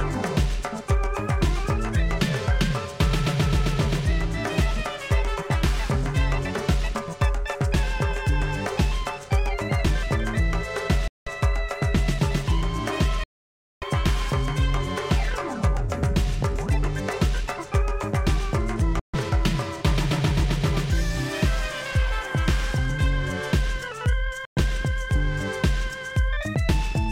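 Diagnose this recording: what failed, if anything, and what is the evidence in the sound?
Bluetooth dropout, likely, at 11.08–11.28, 13.24–13.84, 18.99–19.15 and 24.45–24.58 s. The sound drops abruptly to silence for 0.19, 0.58, 0.14 and 0.12 s, then resumes further along, as if it had continued playing. Packets on the wireless playback link arrived too late and were discarded.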